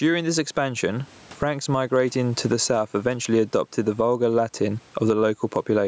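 Gain pumping throughout: the gain swings about 15 dB, likely from a fast limiter. Unlike a gate, the background never falls silent.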